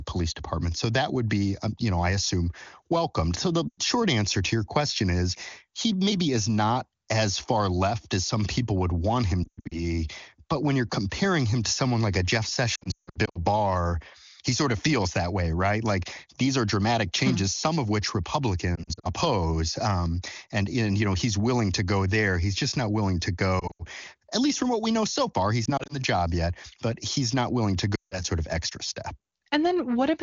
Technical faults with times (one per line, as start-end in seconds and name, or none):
3.68-3.79 lost AMR speech frames
9.44-9.80 lost AMR speech frames
12.75-13.44 lost AMR speech frames
18.75-19.08 lost AMR speech frames
23.59-23.85 lost AMR speech frames
25.65-25.95 lost AMR speech frames
27.95-28.23 lost AMR speech frames